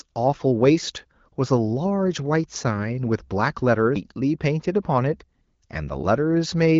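A CD skip at 3.95 s breaks the speech with a tiny tick and a mute lasting only a few milliseconds. The laser lost its track and landed on another turn of the disc's spiral, so playback resumes from a different point and the sound jumps abruptly forward or back by a fraction of a second. The speech carries the light coloration of AMR wideband (HD Voice) coding, with nothing audible above about 7.4 kHz.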